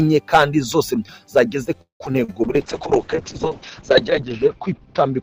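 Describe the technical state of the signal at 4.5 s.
A call bitrate drop is in effect at 4.5 s, lasting from 2.45 s to the end. The bandwidth estimate collapsed, so the encoder fell from 64 kbps to 6 kbps and cut the audio band from 20 kHz to 8 kHz, leaving coarse, watery, muffled sound.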